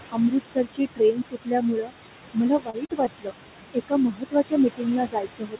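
Throughout the clip, noise suppressor artifacts come from the suppressor pulling steady-noise bands down by about 21 dB frame by frame, so the noise sinks between the words and rises under them. From 0.09 to 1.93 s, and again from 2.33 to 3.34 s, the suppressor mistakes speech for noise and cuts it by up to about 22 dB, so soft consonants and endings sound swallowed. This affects roughly one and a half seconds in the first span and about 0.7 s in the second. Inside that second span, short concealed packet loss occurs at 2.70 to 2.75 s, 2.85 to 2.91 s and 3.05 to 3.08 s. Up to 40 ms of audio arrived too late each time, and the receiver extended the preceding sound to fill the gap, causing brief smears or wobbles. From 3.74 s to the end, speech cut by the noise suppressor returns, with parts of the speech dropped by up to about 22 dB and sounding faint.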